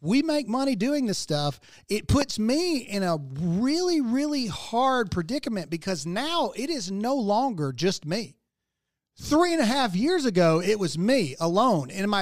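At about 2.22 s there's a single loud pop, over by 2.24 s, sitting well above the level of the speech, something like 15 dB hotter at its peak. It's a short, sharp crack laid on top, and the talking just carries straight on underneath without a break. The likely culprit is a sudden voltage spike getting into the chain, say from static, a switch or a connector being knocked, which the downstream electronics then turn into that brief click.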